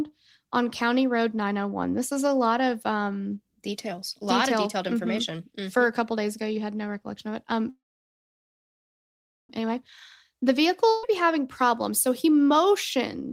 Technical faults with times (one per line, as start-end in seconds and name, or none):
7.69-9.50 call audio freeze
10.89-11.04 burst of packet loss